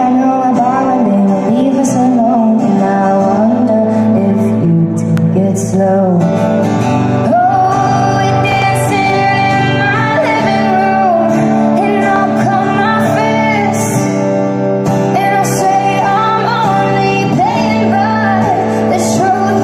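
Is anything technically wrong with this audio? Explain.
Yes, there are three loud pops. The likely cause is a sudden voltage step or pulse, such as a plug, switch, static discharge or driver glitch, entering the signal chain, where later circuits shape it into a brief transient. Each one is a sharp pop, roughly 10 dB above the surrounding sound, with the audio continuing underneath. Single pops land at 5.17 to 5.20 s and at 12.16 to 12.18 s, and a quick double pop falls between 8.52 and 8.64 s.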